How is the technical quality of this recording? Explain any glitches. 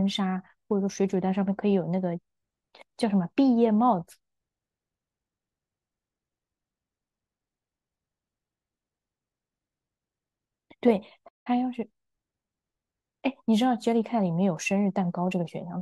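The recording has one glitch. A playback stall at 11.28 s cuts the speech off mid-flow into about 175 ms of silence, and it resumes at 11.47 s. The player likely ran short of data or had its output thread blocked, so nothing reached the output until it recovered.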